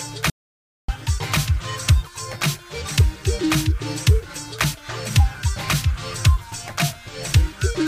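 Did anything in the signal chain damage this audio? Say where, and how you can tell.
Yes. There's an audio dropout to silence from about 0.30 s to 0.88 s, so roughly 0.58 s of material is simply gone. The sound cuts out abruptly and comes back mid-flow, and the gap in between is dead silent, with no room tone at all. That points to the input side of the chain. The likely cause is the source dropping away through a disconnected device, a failed link or a stray mute, while the recorder kept writing silence.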